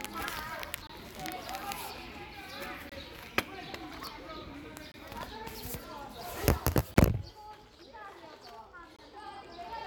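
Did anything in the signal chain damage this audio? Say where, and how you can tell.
Yes: gaps between chunks, at playback or chunked delivery, leave hard-edged holes of about 23 ms at 0.87, 2.89, 4.92, 6.94 and 8.96 s, one every 2 s.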